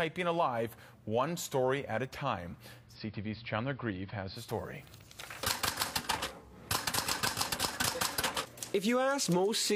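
From 2.78 s to 4.51 s the receiver loses the digital signal and performs a digital radio blend to analogue AM, crossfading over 186 ms. Treble falls away with the narrower AM bandwidth and hiss rises to roughly 35 dB below the programme, with level unchanged.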